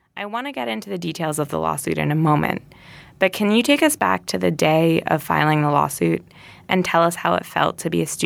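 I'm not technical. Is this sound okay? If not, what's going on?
No, not quite. At the very start, from about 0.17 to 2.69 seconds, there's automatic gain rising: the recording device decided the input was too quiet and kept turning itself up. So the voice and the background noise swell together over those first two and a half seconds instead of starting at a steady level. By the time you hear "but can you take", the level has settled at its new, louder setting.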